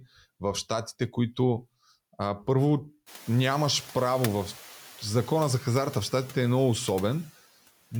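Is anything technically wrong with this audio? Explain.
No, nothing in this speech recording points to a technical fault. The background noise of the room rises by about 21 dB around three seconds in, but it stays about 23 dB below the speech and belongs to the recorded space rather than to the equipment.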